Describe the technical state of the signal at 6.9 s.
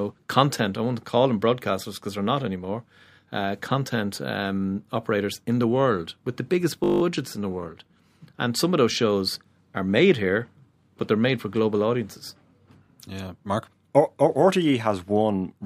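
At 6.9 s the signal is caught in a system hang loop running from 6.84 to 7.02 s, just after "world with the biggest" and before "in the world and". The playback system stalled while the sound hardware kept replaying the same 20 ms piece of its ring buffer, nine times over. Because the loop is so short it repeats at 50 Hz and fuses into a steady buzz rather than a stutter. Little or no audio seems lost. Unlike a dropout, there is no silence here, only exact repetition.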